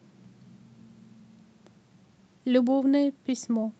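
Nothing in the speech stood out as a technical problem on listening.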